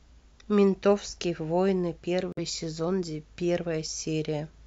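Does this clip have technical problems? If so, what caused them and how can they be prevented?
Yes. The speech drops out briefly between 2.32 and 2.39 s. The sound cuts to about 49 ms of silence, then resumes. This is likely a Bluetooth stall. Radio interference delays packets on the wireless link. The headphone buffer empties before the resent packets arrive, so playback halts until they do. To prevent it, keep the phone close to the headphones and away from busy Wi-Fi or other 2.4 GHz sources.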